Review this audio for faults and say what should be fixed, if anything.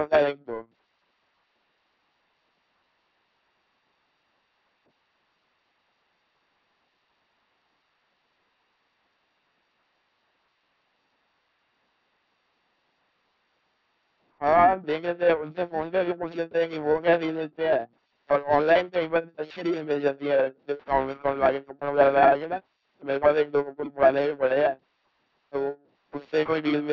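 Throughout the clip, an LPC-10 vocoder reduces the speech to a pulse-or-noise source driving a short filter, giving a buzzing robotic voice with nothing above 3.8 kHz, which fits a 2.4 kbit/s link. Prevent it by using a modern, higher-rate speech codec.

For the whole clip, periodic clock jitter at around 1 kHz puts sidebands around each component, adding a rough metallic edge that vanishes in pauses. Prevent it by shielding or isolating the converter's clock from interference.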